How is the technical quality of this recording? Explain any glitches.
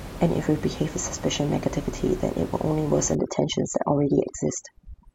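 The recording has one clear fault, overdone noise removal, running from 3.15 s to the end of the speech. A noise reduction stage is working far too aggressively here: any frequency band that sits close to its idea of the noise gets pushed down or switched off, and the softer parts of the voice are swept away with it. The room noise, about 14 dB below the speech before this point, drops and breaks up into twinkling specks.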